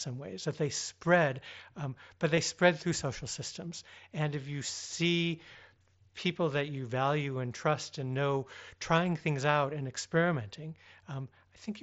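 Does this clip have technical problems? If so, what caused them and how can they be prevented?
Yes. Concealed Bluetooth headset packet loss occurs at 2.36 s and 4.66 s. Each is a gap of about 15 ms, which fits two lost packets, filled by repeating a matching stretch of recent waveform. On a waveform it appears as a short, suspiciously periodic patch. On a spectrogram it shows as a brief smear of copied harmonics with a slight discontinuity where real audio resumes. Keeping the headset close to the phone, clear of body obstruction and 2.4 GHz interference, prevents these dropouts.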